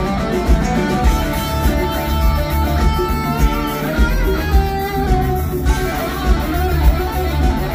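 From 3.88 to 5.07 s the audio plays about 5.6% fast, raising pitch by roughly 95 cents, close to a semitone, then snaps back to normal. This drift correction step is likely clock-matching software jumping the playback rate to rebalance its buffer.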